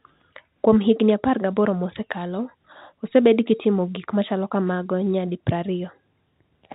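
Nothing goes wrong anywhere in this speech recording, which comes over an ordinary G.711 telephone line with that familiar narrow band topping out below 4 kHz.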